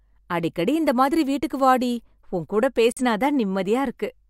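Speech, with a digital broadcast dropout from 2.92 to 3.01 s, right after "வீட்டுக்கு வாடி உன் கூட": a roughly 3 ms fade into a muted hole, fitting one lost frame, not concealment that fills the gap.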